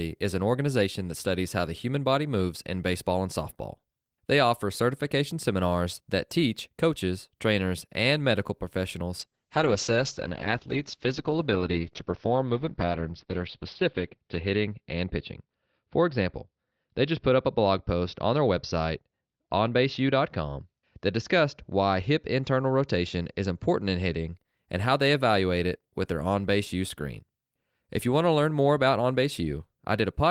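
From 9.21 to 24.41 s, a call bitrate drop starves the encoder, consistent with roughly 32 falling to 8 kbps; speech turns coarse and watery, muffled above 6 kHz.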